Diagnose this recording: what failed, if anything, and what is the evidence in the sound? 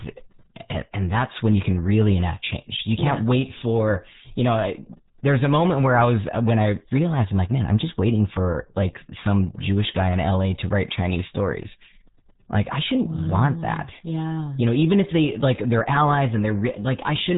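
The failure is at the codec stage: RealAudio 14.4 compression across the whole clip. Nothing above 3.8 kHz survives, and the speech sounds muffled and gargly throughout. The heavy smearing fits an 8 kbit/s dial-up speech coder discarding most spectral detail.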